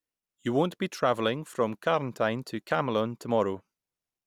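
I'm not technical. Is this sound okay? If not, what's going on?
Yes, nothing in this recording sounds wrong, so there's nothing here you need to worry about.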